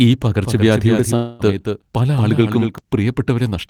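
From 0.44 s to 2.78 s the speech is heard twice, with a full-band copy about 5 dB quieter trailing roughly a fifth of a second behind. It has no room colour and cuts in and out abruptly. This doubled audio track is likely a second, slower capture path being mixed in with the first.

Between 1.15 s and 1.41 s the sound turns into a fading buzzy continuation of the last moment, about 240 ms long. The audio then resumes further on, with that stretch lost rather than delayed. This long network dropout likely comes from packets that never arrived, with the receiver filling the gap with the synthetic tail.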